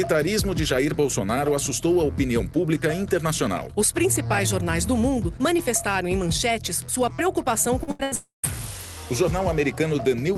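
A short concealed packet loss comes first, at 7.83 to 7.90 s. About 40 ms of audio failed to reach the decoder in time, and the receiver bridged the hole by carrying the previous sound forward, pitched if voiced and as shaped noise otherwise, before blending back into the real signal. It is heard as a quick smear or wobble.

Two bursts of packet loss follow almost at once, at 7.91 to 8.02 s and 8.03 to 8.14 s, each about 80 ms long. Several packets in a row never arrived or arrived too late to play, so the receiver again extended the last sound, letting it sag in level as each gap ran on. The result is a held buzz or thinning hiss, and the audio picks up further along with the material in between missing.

A long network dropout then runs from 8.15 to 8.46 s, about 280 ms in which no usable audio was played. The concealed tail fades out, leaving roughly 150 ms of silence before the sound returns further on, with that stretch lost. 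The likely cause is a stall in delivery on the network path. The call codec path itself, band-limited at 12 kHz, fits Opus at around 32 kbps.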